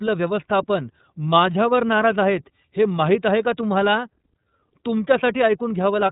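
Recorded speech that sounds narrow and boxed-in all the way through, with nothing reaching above about 3.8 kHz, and a plainly audible rough, slightly synthetic grain. That combination is the signature of the iLBC codec. It rebuilds each short block of the voice excitation independently, here in blocks that fit 30 ms frames at 13.33 kbps. That trades smoothness for robustness and leaves this coarse, telephone-band texture across the whole recording.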